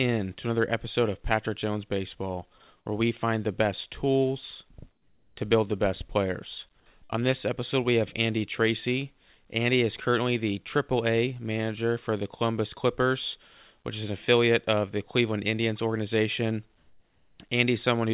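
At 2.78 to 2.86 s and 4.92 to 5.36 s the quiet background, some 40 dB below the loudest parts, turns flat and featureless, about 2 dB then about 6 dB quieter. This is likely comfort noise in place of the background, synthetic noise filling pauses the sender stopped transmitting. From 7.04 to 7.12 s the sound is held and faded for about 56 ms, then jumps ahead with about 60 ms missing, a burst of packet loss concealed by the receiver. The same smooth substitution returns from 16.78 to 17.40 s, about 1 dB louder, all within a band that stops at 4 kHz, as G.711 does.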